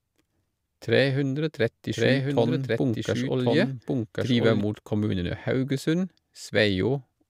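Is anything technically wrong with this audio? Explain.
Yes. From 1.93 s to 4.61 s there is a doubled audio track, starting just before "mot kommunene". The same speech was likely captured a second time through a slower path, or an edit left two copies out of step, so a full-band duplicate runs about a second behind the original at roughly equal loudness. It carries no decay or room colour, so two identical streams of speech overlap, and the copy cuts in and out abruptly at both ends.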